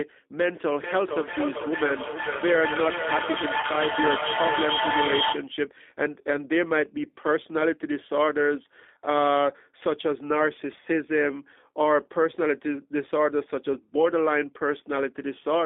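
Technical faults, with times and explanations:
Throughout, G.729 codec: speech squeezed to roughly 250 Hz–3.6 kHz at 8 kbit/s sounds rough and synthetic, unlike plain band-limiting, because it's rebuilt from a model.
0.46–5.54 s, feedback echo between two devices: each word returns about every 400 ms, nearly as loud as speech (about -1 dB), piling up as two devices loop each other rather than fading like room reverb.
3.61 s, VoIP packet loss concealed by the speech codec: a 20 ms gap, likely one lost packet, is filled with a brief extrapolated sound rather than silence, and the voice stays weakened just after.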